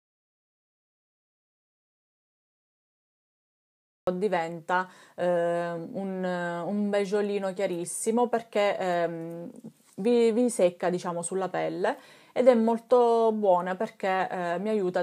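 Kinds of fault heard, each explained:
Audio dropout to silence: the clip opens in silence with no room tone until about 4.07 s, when the sound starts abruptly mid-flow. This is likely a lost input while recording continued, unlike a natural pause, which keeps background noise.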